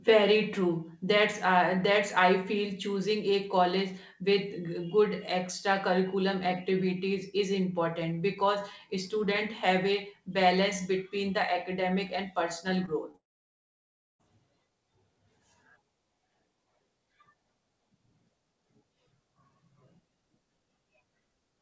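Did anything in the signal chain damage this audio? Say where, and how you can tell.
Yes, on the network side of the call. Around 12.86 to 12.89 s, and again at 13.11 to 13.16 s, there are quick smeary wobbles. These are short concealed packet losses: about 20 ms of audio went missing each time, and the decoder bridged the hole by extending the preceding sound before blending back in.

Right after that, from 13.16 s, you hear a brief buzzy tail, and then close to a second of near-silence until 14.21 s. The audio picks up again with that whole stretch missing. That's a long network dropout, most likely a stall in packet delivery on the G.722 call path, where the top end stops at 8 kHz. Concealment covered only the first few hundredths of a second and then gave up.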